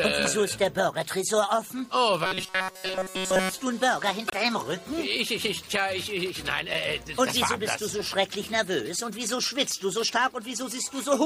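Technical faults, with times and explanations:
2.25–3.54 s, robotic sound from repeated short buffers: for this stretch the sound loses its natural movement and becomes a rigid, metallic buzz pitched at 188 Hz, which still loosely tracks the underlying audio. A fixed pitch like that fits a tiny slice of about 5.3 ms being played over and over, most likely because fresh audio arrived too slowly and the player kept looping its last buffer while the real material was dropped.
4.27–4.34 s, broken MP3 bit reservoir: a brief glitch of roughly 70 ms where the audio jumps forward and the first moments after the jump come out garbled rather than clean. MP3 frames of 26.1 ms can lean on bits stored in earlier frames. The likely cause is missing frames, so the decoder reached back for borrowed data and found bytes belonging to a different frame, decoding a few frames of nonsense until the stream resynchronised.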